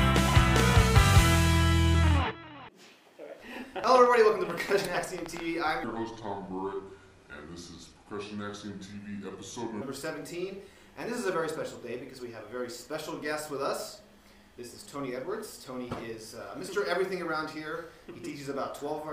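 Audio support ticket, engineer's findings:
Train of clicks, 3.84–5.41 s: around twenty similar pops at an uneven pace, about 13 a second, sitting roughly 10 dB over the program and heard in the gaps too. Likely a flaky connection, power supply or nearby equipment injecting pulses.

Section at the wrong speed, 5.84–9.82 s: playback at about 0.75x, so everything drags and sits roughly five semitones low, with tempo and pitch shifting together. Likely an editor or player running that stretch against the wrong clock.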